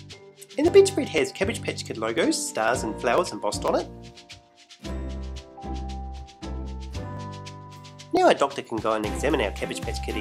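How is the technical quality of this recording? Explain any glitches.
The recording has one recurring fault: periodic USB or driver dropouts. From 0.18 s to 9.67 s, a small tick repeats about every 0.5 s, roughly twenty times. Each time, something in the system briefly stalls the USB bus or audio driver. About a millisecond of audio is skipped outright, not replaced with silence. The waveform jumps across that gap, producing a sharp, evenly spaced click. The ticks are heard only where there is sound to interrupt.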